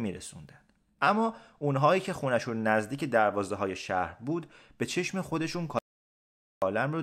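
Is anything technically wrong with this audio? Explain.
Yes. There is an audio dropout to silence from 5.79 to 6.62 seconds. The speech cuts off abruptly and returns just as suddenly, with about 0.83 s missing. The gap is silent. No room tone or background noise remains. The likely cause is a momentary loss of the input signal, such as a link failure or brief mute, while recording continued and wrote silence. Whatever was said during that gap is unrecoverable.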